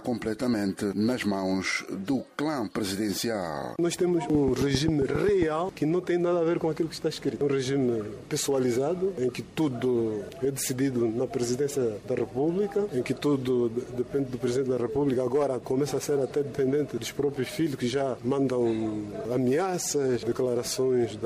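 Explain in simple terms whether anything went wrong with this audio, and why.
A train of clicks runs from 4.35 to 5.43 s: about ten sharp ticks, evenly spaced at 7.4 per second, laid over the sound. Something was likely injecting a repeated pulse into the signal, such as interference from nearby equipment or a faulty connection or power supply.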